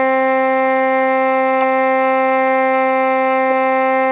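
The music comes through a working call path with no technical faults, its content stopping at about 4 kHz as a G.711 A-law telephone codec would leave it.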